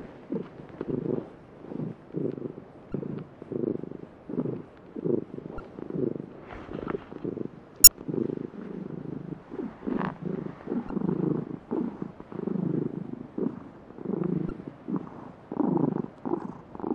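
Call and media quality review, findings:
Damaged data in a compressed stream: five short blips, each roughly 30 to 40 ms, at 2.90–2.93 s, 5.57–5.60 s, 7.84–7.88 s, 10.87–10.90 s and 14.47–14.51 s. The probable component is the decoder input: corrupted bytes in the encoded stream. The decoder misreads the damaged frames, produces garbage output, loses sync, then recovers at the next valid frame header. The spacing is irregular, roughly every 2 to 4 s.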